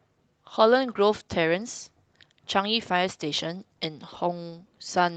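Nothing's wrong with this one: the speech comes over the call link as expected, with the top end rolled off above about 8 kHz the way the codec on that path normally does it, and nothing else to flag.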